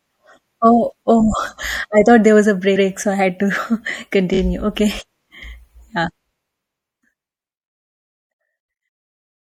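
Throughout the speech, the encoder likely ran short of bits in MP3 compression, pointing to a low rate around 64 kbps. It dropped weak frequency lines and trimmed the treble, so the damage is plainly audible: a watery, swirly texture, metallic chirps on s sounds, and smeared consonant attacks. These persist through the fade-out that starts around 6 s and carries to the end.

From 2.75 to 2.87 s, after "thought there was a" and before "so I had", a 120 ms block of repeated frames was played once more. The same slice of speech stutters. At 4.33 to 4.38 s a second, much shorter run of repeated frames loops a 24 ms block twice extra, adding 48 ms as a brief stutter.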